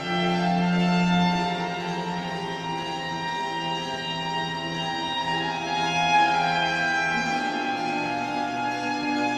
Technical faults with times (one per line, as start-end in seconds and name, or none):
none